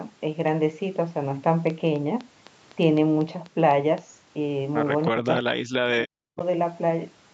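Something, likely interference from nearby equipment or a faulty connection or power supply, injects a train of clicks from 1.70 to 3.99 s: roughly ten similar pulses at a steady 3.95 per second, peaking a few decibels above the speech and heard as regular ticking over it.

From 5.10 to 6.41 s, with both sides talking at once, the echo canceller apparently fails to tell the talker from the loudspeaker echo and turns everything down. This is speech suppressed in double talk. For about a second in total, the voice dips by as much as 40 dB and drops out in pieces.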